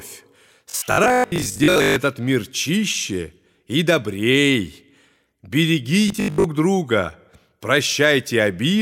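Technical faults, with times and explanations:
0.70–1.96 s and 6.08–6.44 s, robotic sound from repeated short buffers: the audio goes into a stiff metallic 50 Hz buzz that still loosely tracks the speech, ending right before "мир чище и" the first time. It's likely a 20 ms chunk being replayed while most of the real audio gets skipped.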